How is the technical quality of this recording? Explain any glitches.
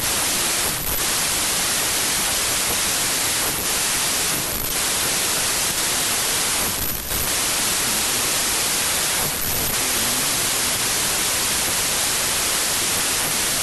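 The technical quality is poor: the whole recording suffers from a wrong sample width error.

Throughout the clip, 32-bit samples are being read as packed 24-bit ones, so byte boundaries slip and most values mix fragments of neighbouring samples. The speech sits buried under loud, harsh noise, slowed to 0.75× with lowered pitch. The waveform looks like dense hash, and the spectrogram shows broadband noise smeared over faint, compressed formant traces.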